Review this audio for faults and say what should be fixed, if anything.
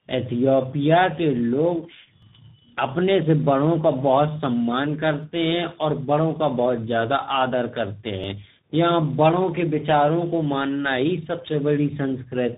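Tandem speech coding runs through the whole recording. The speech passed through two speech coders in sequence, G.729A at 8 kbit/s and then CVSD at 64 kbit/s, with a G.711 mu-law link between them. Each coder re-models the previous one's errors, so the roughness, muffling and warble compound, and nothing remains above 3.8 kHz. A single narrowband codec would show the same band limit but much less of this layered graininess. To prevent it, keep the call in one codec end to end, or transcode only once through a wideband or lossless path.

Overlapping chunks cause brief stutters at 2.22 s (between "के लोग" and "अपने से बड़ों का"), 5.23 s, 8.24 s (after "बहुत ज़्यादा आदर करते") and 11.24 s (after "को मानना ही"). At each join, about 6.5 ms of audio plays twice because every 3.0 s chunk begins slightly before the previous one ends. The strict 3.0 s spacing and the repeated sliver distinguish this from packet-loss dropouts, which remove sound at irregular times. 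To prevent it, align chunk boundaries exactly, or crossfade and trim the overlap before output.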